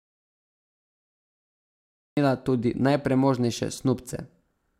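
From the start until 2.17 s, the input was likely lost and silence was written: an audio dropout to silence, dead quiet with no room tone before speech cuts in.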